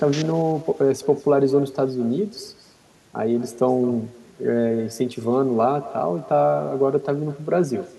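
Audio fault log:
throughout, echo with no canceller: the speech is trailed about a fifth of a second later by a thin copy about 18 dB quieter, fed back from the far loudspeaker uncancelled.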